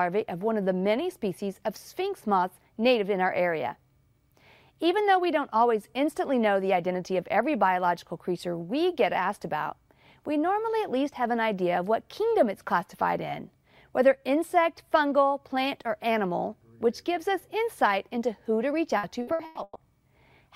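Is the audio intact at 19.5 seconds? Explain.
No. At 19.5 seconds the sound is choppy and robotic, with pieces missing, inside a stretch of repeated packet loss from 18.97 to 19.78 s. Five gaps, the longest 120 ms, were each patched by extending the last sound, covering about half that stretch.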